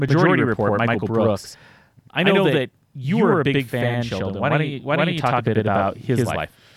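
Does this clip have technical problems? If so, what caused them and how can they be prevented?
Yes. Channel delay (doubling) runs through the whole speech clip. One channel arrives 85.3 ms late, which fits a 4096-sample buffer, and the mono sum plays it back as an equal-level slap echo. The waveform shows every onset repeated 85 ms later, and the spectrogram shows each burst followed by a matching copy. Aligning both channels' buffering before the mono fold-down prevents it.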